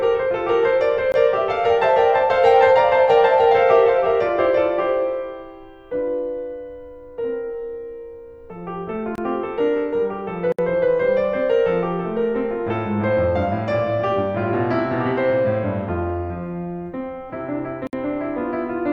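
The music drops into a block of digital silence four times: 1.12–1.14 s (20 ms), 9.15–9.18 s (26 ms), 10.52–10.59 s (64 ms) and 17.87–17.93 s (60 ms). Each time the output went to zero with no fade, so each gap is heard as a brief hole, the longer two more plainly. On the waveform each gap is a dead-flat line. On a spectrogram it is an empty vertical strip.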